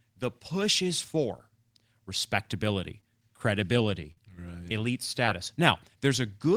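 At 3.00 to 3.04 s, a short concealed packet loss: about 20 ms of speech never reached the decoder in time, and the receiver continued the preceding sound for about 22 ms before blending back. The gap is heard as a brief smear or wobble. At 4.12 to 4.18 s, a burst of packet loss leaves a 50 ms hole. The receiver extends the last sound and fades it down, so it becomes a held buzz or a fading hiss. The speech then resumes with 50 ms missing. At 5.27 s, another short concealed packet loss replaces about 10 ms with 9 ms of continued sound, giving another momentary smear.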